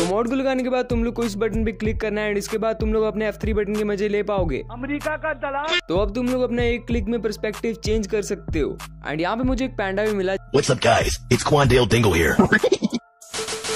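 No technical faults can be heard anywhere in the audio; the signal stays steady and intact throughout.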